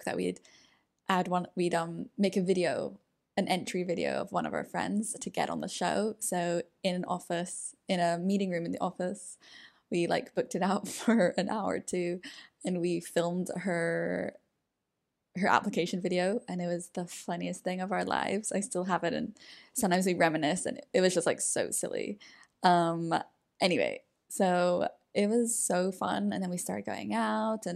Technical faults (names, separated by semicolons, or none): block of digital silence